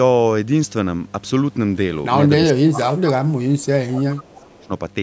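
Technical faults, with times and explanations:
2.53–4.71 s, speech suppressed in double talk: the speech drops by roughly 25 dB in places, likely an echo canceller muting the local talker while the far side also speaks.
4.34–4.42 s, echo leak: a faint copy of earlier speech, about 30 dB down, returns after 416 ms, likely residual loudspeaker echo escaping the echo canceller.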